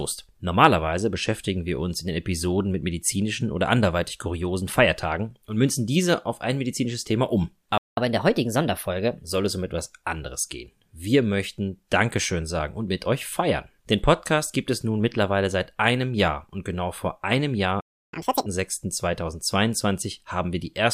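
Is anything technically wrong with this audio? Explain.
Yes, the speech suffers from playback stalls, each followed by catch-up at higher speed.

The first playback stall runs from 7.78 to 7.97 s, and a second from 17.81 to 18.13 s. The likely cause is the player running short of buffered data, or its output thread being blocked, so nothing reaches the output until it recovers. The speech cuts to silence mid-flow for about 190 ms the first time and about 320 ms the second, then resumes.

Each gap is followed by catch-up at higher speed, as the player resamples its backlog faster to regain the lost time. From 7.97 to 9.25 s it runs at 1.15 times normal speed, lifting the pitch by about two semitones, a mild hurried brightness. From 18.13 to 18.46 s it runs at double speed, raising the pitch by around ten semitones, a brief squeaky chipmunk burst before normal playback returns.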